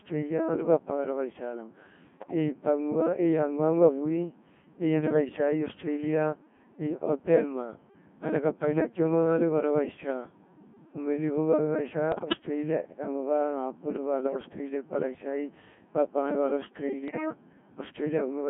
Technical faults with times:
0.00-18.50 Codec 2 vocoder
2.20-2.34 bit errors on digital voice radio
12.12-12.37 bit errors on digital voice radio
17.08-17.26 bit errors on digital voice radio

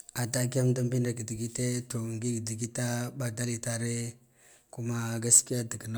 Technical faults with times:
none

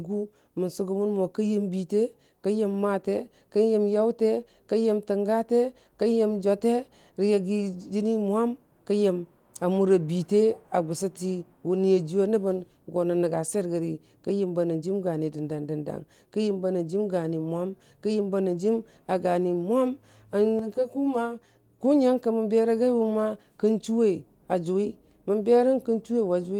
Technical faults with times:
20.59-21.79 channel delay (comb filtering)

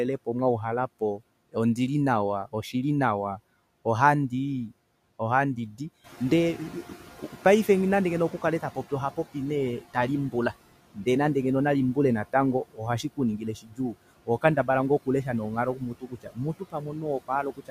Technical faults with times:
0.00-17.71 noise suppressor artifacts
6.04-9.20 noise suppressor catching up
12.71-12.81 speech cut by the noise suppressor
13.38-13.95 speech cut by the noise suppressor
14.26-14.69 speech cut by the noise suppressor
15.75-17.71 speech cut by the noise suppressor

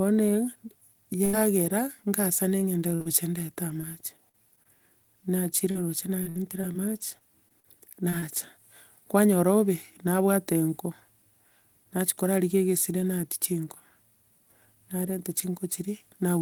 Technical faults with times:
1.25-1.35 burst of packet loss
2.95-3.07 short concealed packet loss
3.81-4.67 repeated packet loss (robotic sound)
5.71-8.24 repeated packet loss (robotic sound)

